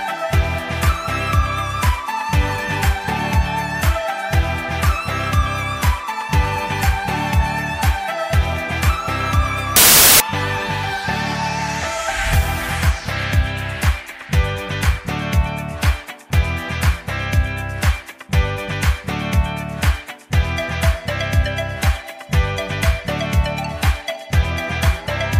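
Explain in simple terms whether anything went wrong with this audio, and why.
From 9.76 to 10.20 s the sound turns into a burst of loud hiss. These are samples built from the wrong bytes: the pieces of each sample were joined together wrongly, so the tiny, fast-changing details became the loudest part, producing noise.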